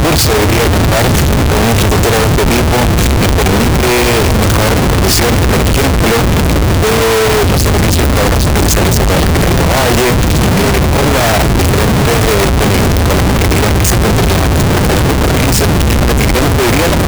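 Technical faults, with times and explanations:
Throughout, signed and unsigned mixed up: quiet stretches blare as loud as the rest, unlike clipping; likely 16-bit samples read with the top bit flipped.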